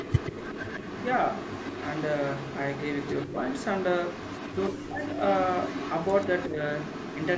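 A far-end loudspeaker's echo canceller is likely leaving residue, so an echo leak returns a delayed copy of the speech about 136 ms behind it, roughly 10 to 15 dB down. It sounds like a shadow trailing the talker from 0 to 3.27 s, 3.46 to 4.7 s, 5.07 to 5.13 s, 5.29 to 6.46 s and 6.76 s to the end.

Between these stretches, the canceller likely cannot separate the talker from the returning echo during double talk and turns both down, so the speech is suppressed in double talk. There is a slight dip at 3.27 to 3.36 s, a deep near-cut at 4.71 to 5.03 s, and a clear duck of around 15 dB at 6.48 to 6.6 s.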